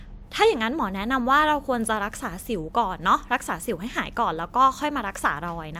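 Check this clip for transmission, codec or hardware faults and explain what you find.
No faults can be heard anywhere in this recording.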